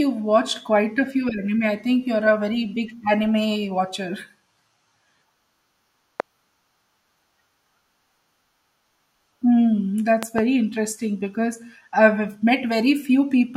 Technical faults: loud pop

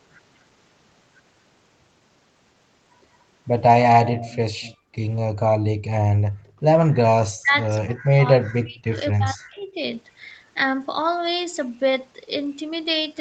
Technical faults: echo leak; background gated by the echo canceller; speech suppressed in double talk

